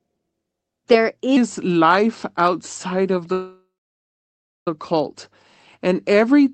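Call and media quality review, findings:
Section at the wrong speed, 1.37 s to end: playback likely clocked wrong at 0.83x, so the speech runs slow and drops about three semitones, deep and dragging.

Call audio freeze, 3.32–4.68 s: packets likely stalled and the jitter buffer ran empty. Last sound stretched into a fading fill, a 1.34 s gap with about 0.99 s of it silence, nothing lost.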